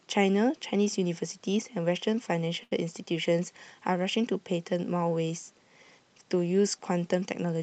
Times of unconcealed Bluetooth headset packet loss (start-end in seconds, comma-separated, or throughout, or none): none